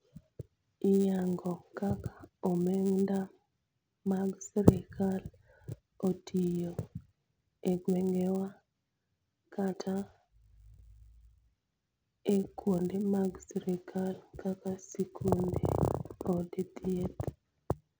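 The resampler was restarted on every block. It treated each 10 ms chunk of the speech as a separate piece, so at each boundary it was missing the neighbouring samples it needed. That leaves a small error at every block edge throughout the clip, heard as a buzz repeating at 100 Hz that rides on the speech and stops in pauses. The sound points to an upsampling from 16 kHz to 48 kHz.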